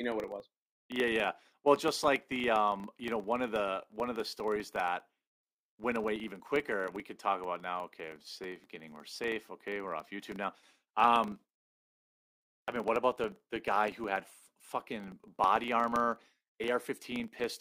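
From start to finish the speech carries a buzz at 25 Hz from a filter restarted on every block. The filter loses its state every 40 ms and starts from silence, so each block opens with a tiny tick. Unlike mains hum, it rises and falls with the speech level.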